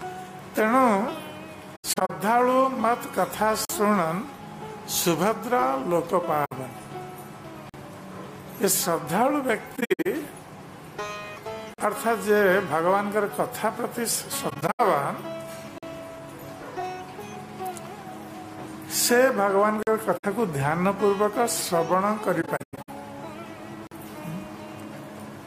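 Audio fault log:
1.75–2.11 s, 6.45–6.52 s, 9.76–10.06 s, 14.50–14.80 s, 20.17–20.25 s, 22.41–22.89 s: AAC frame loss with muting. Lost frames were zeroed and the overlapping windows fade out and back in, giving soft-edged holes. The short ones are about 64 ms, and the longer stretches are broken holes scattered over up to about 470 ms. Their irregular timing sets them apart from the chunk gaps.
3.65, 7.69, 11.74, 15.78, 19.83, 23.87 s: gap between chunks. Each is a 44 ms silence inserted at a join between 4 s chunks, likely from padding or late chunk starts. These holes recur at a steady 4 s spacing, unlike the faded, irregular frame losses.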